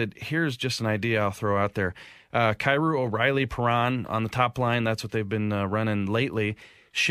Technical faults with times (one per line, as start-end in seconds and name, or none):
none